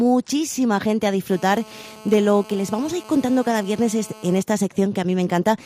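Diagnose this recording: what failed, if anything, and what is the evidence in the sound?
GSM phone buzz enters at the analogue stage, from 1.31 s to 4.42 s: a hard, raspy buzz at 217 Hz, nearly steady, as a phone in a call transmits, about 22 dB below the signal. A nearby handset's radio bursts are rectified by the analogue audio circuitry, turning the 217 Hz burst envelope into audible pulses. A spectrogram shows a fixed 217 Hz comb of harmonics running into the kilohertz range, ignoring the programme; the waveform carries a regular pulse train.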